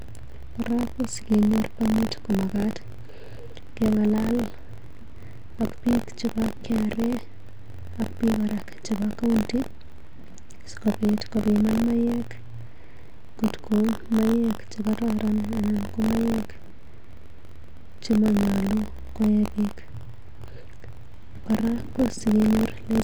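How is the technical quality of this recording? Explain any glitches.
The recording has a continuous defect: buffer tearing across the full length of the speech. The writer and reader of the playback ring buffer have drifted so they cross every period. A small slice, around 4 percent, of each buffer replays audio about 40 ms old, bounded by hard joins. The result is a robotic buzz near 46.9 Hz, which fits a 1024-sample buffer, audible only while speech is present.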